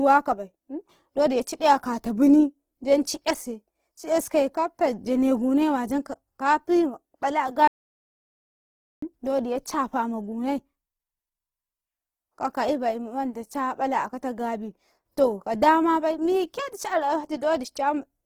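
Audio dropout to silence from 7.68 to 9.02 s cuts this speech clip dead for about 1.35 s. The gap is silent with no room tone, so the input was likely lost, through a disconnected device or failed link, while recording continued and that stretch of speech is gone. Opus compression runs throughout, heard as rough, grainy, noisy texture on the voice instead of swirling, because the codec fills starved bands with folded or noise energy. The damage is plainly audible and points to a low bitrate around 16 kbps in its music mode, with content reaching up to 20.4 kHz.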